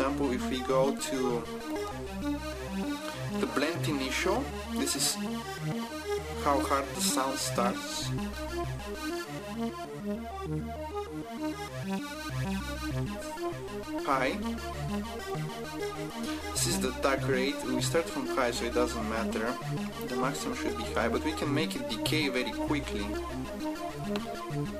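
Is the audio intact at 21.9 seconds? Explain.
Yes, at 21.9 seconds the audio plays through intact, with no dropout, click, distortion or other fault at that moment.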